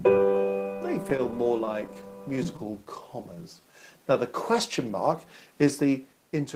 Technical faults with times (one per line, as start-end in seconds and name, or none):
1.03-2.89 repeated stalls (stutter)
3.35-4.54 jitter buffer slow-down